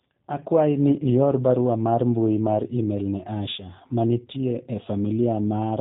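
From start to finish, the speech has been squeezed through a G.729 codec, and the result sounds consistent with a roughly 8 kbit/s stream. The coder doesn't keep the waveform. It rebuilds each 10 ms frame from a vocal tract filter, a pitch predictor and a few pulses, and it discards everything above 4 kHz. The damage is plainly audible: the speech sounds dull and band-limited, with a rough, slightly synthetic texture.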